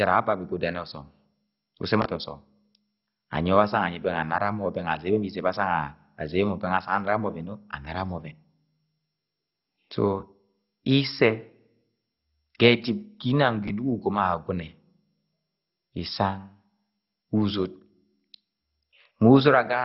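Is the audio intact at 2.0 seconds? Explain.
No. From 2.02 to 2.06 s the audio has chunks out of order. One short chunk plays two chunk-lengths later than it should, after the material that ought to follow it. That leaves three hard joins, heard as a brief jumbled flutter. The jumps suggest chunks of about 11.6 ms. Unlike a dropout or a gap, nothing is missing here. The sound is only reordered.

Across the whole clip, including this moment, the sound is also dull and gurgling, with nothing above 5.6 kHz and a granular, flickering roughness. That points to MP2 compression at a low rate, likely around 32 kbps. The damage is steady throughout rather than a momentary disruption.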